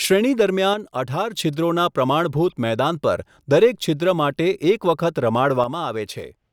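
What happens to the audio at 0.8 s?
Between 0.74 and 1.35 s the speech falls abruptly by about 6 dB, likely because one channel drops out and the mono sum keeps only half of the shared signal. The waveform steps down and back sharply, and the spectrogram dims evenly across all frequencies.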